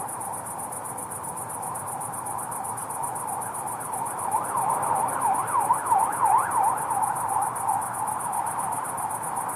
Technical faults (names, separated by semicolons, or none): none